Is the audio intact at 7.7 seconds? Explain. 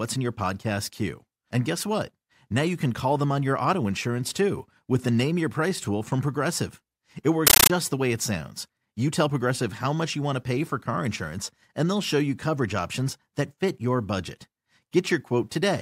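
No, a compressed stream played as audio runs from 7.47 to 7.70 s: undecoded AC-3 data, fitting a 640 kbps stream, replaces the speech with loud static chattering at 31.25 Hz.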